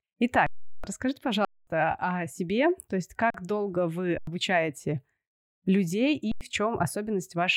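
Underrun with held sample occurs five times in this speech clip: at 0.46 to 0.84 s (372 ms), 1.45 to 1.67 s (224 ms), 3.30 to 3.34 s (41 ms), 4.18 to 4.27 s and 6.32 to 6.41 s (93 ms each). Each time, the output buffer ran dry and the converter froze on its last value, so the waveform goes flat and the sound stops. The speech resumes further along, with roughly the gap's length missing. The 93 ms gaps fit 4096-sample blocks, and the first fits 16384.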